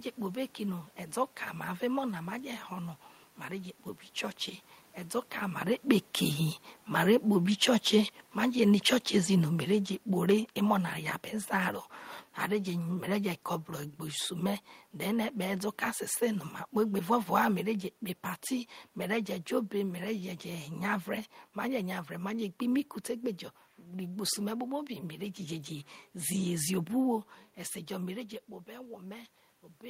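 From 7.27 to 15.67 s the automatic gain control judges the input too loud, or its background noise too strong, and steadily winds its gain down, about 7 dB in all, so this is automatic gain falling. The speech starts this stretch at its earlier level and then sinks gradually, with the room noise sinking right along with it, which separates it from the talker shifting position around five and a half seconds, where only the voice changes.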